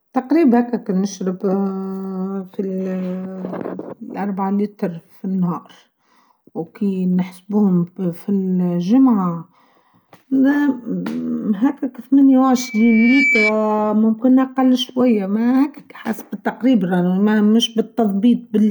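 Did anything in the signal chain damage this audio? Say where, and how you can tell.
Yes. Loudspeaker feedback squeal from 12.56 to 13.53 s: a steady 2.3 kHz tone swells over roughly three-quarters of a second to a few decibels above the speech. The playback loudspeaker leaked into the microphone, and loop gain exceeded unity at that frequency.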